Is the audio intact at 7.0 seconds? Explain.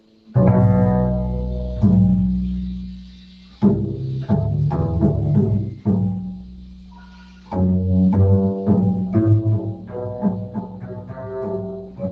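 No. A speech-tuned noise suppressor stays active throughout, treating steady tones, ambience and decay as noise, so the sound pumps, flutters or thins, with level swinging by around 15 dB. From 6.21 to 7.53 s it judged this sound itself to be noise and pulled it down by up to about 12 dB, sinking sustained parts and shortening decays while sudden onsets mostly pass.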